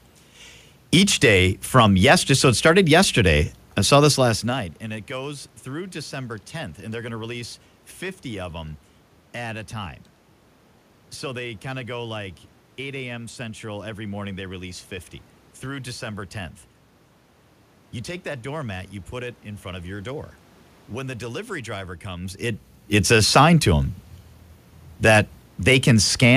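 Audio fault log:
No system faults are audible anywhere in the recording.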